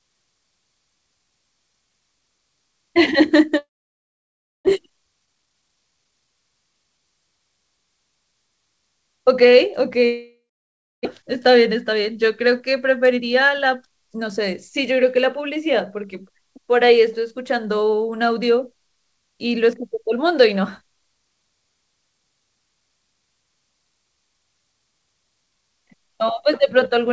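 From 3.58 to 4.69 s a long network dropout likely halted packet delivery. The sound trails off as a fading buzz into near-silence, and about 0.6 s of speech is lost outright. From 4.71 to 6.79 s a jitter buffer speed-up follows: the receiver trims pitch periods to shed roughly half a second of built-up delay, so speech runs at 122% speed with unchanged pitch and sounds hurried. A second dropout from 10.06 to 11.07 s again fades to quiet and skips about 0.6 s. Two milder speed-ups follow, at 108% from 11.22 to 14.48 s and at 106% from 14.91 to 16.39 s.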